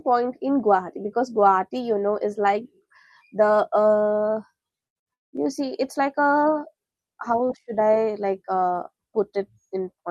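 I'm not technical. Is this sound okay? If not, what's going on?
No. From 4.87 to 5.44 s there is repeated packet loss, giving a robotic sound. Four times the audio dropped out, and the gaps were patched by stretching the previous sound, so most of that half-second is filler. The speech turns choppy.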